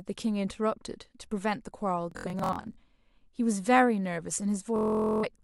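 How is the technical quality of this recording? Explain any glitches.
Two bursts of Bluetooth stutter spoil the recording, from 2.12 to 2.78 s and from 4.76 to 5.25 s. Late or lost wireless packets made the receiver replay its last short buffer, so the speech breaks into a buzzing machine-gun rattle, then jumps ahead, skipping about 370 ms and 460 ms. A spectrogram shows evenly spaced vertical stripes, and the waveform shows one tiny slice copied repeatedly.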